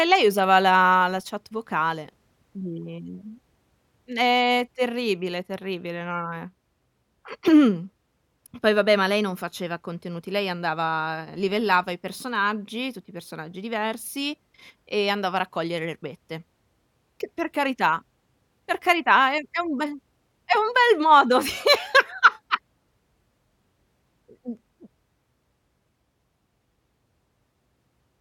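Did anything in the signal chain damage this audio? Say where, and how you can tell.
No, nothing in the signal chain damaged this audio.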